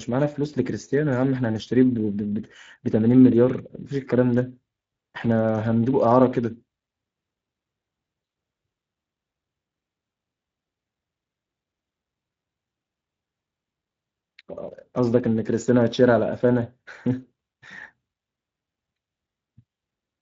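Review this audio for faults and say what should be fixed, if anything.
Throughout the speech the sound is coarse and grainy, with a rough, hoarse edge on every stretch of talk, and the damage is plainly audible from start to finish. This is Speex codec coding. Speex is a CELP codec that rebuilds speech from a vocal-tract filter driven by a coded excitation signal. When too few bits go to that excitation, the rebuilt signal picks up this noisy texture. The amount of degradation here points to a bitrate of roughly 20 kbps. To prevent it, record or deliver the speech with a modern, higher-quality codec such as Opus at a generous bitrate instead of Speex.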